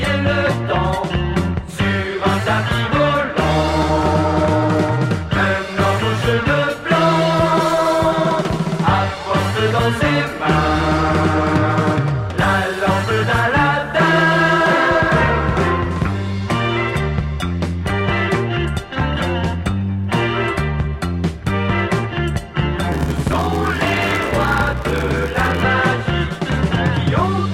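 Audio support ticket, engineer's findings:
Block size mismatch (padded), 22.91–25.63 s. Buzz at 93.8 Hz, audio slowed to 0.861x at about normal pitch. Short writer blocks zero-padded to fit a 512-sample read. Waveform shows regular flat gaps. Spectrogram shows evenly spaced vertical dropout lines.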